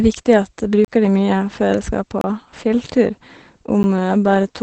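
From the start, the speech carries Opus voice compression throughout. The sound points to the SILK linear-prediction coder in wideband mode at a low rate, around 12 kbps, working in 20 ms frames. Nothing is present above 8.7 kHz, so the top of the band is missing and sibilants lose their edge. The excitation is coded coarsely, which leaves the speech plainly muffled, slightly hoarse and faintly robotic.

At 0.85 s there is a block of digital silence lasting about 34 ms, where the output drops straight to silence and returns without any fade. A second one runs from 2.21 to 2.24 s, about 27 ms long. A shorter one, about 10 ms, falls at 3.83 s. Each is an abrupt hard cut. The two longer ones come across as brief holes in the speech, and the 10 ms one as a tick. This fits the output buffer not being filled in time.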